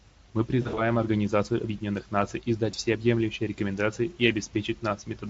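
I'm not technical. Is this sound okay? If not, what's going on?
No. There is VoIP packet loss concealed by the speech codec at 0.61–0.80 s and 2.71–2.75 s. Pieces of the call went missing, and the decoder filled the gaps by stretching the preceding sound. The result is a brief smeared patch, a buzzy tone or a fading noise, that takes a moment to recover.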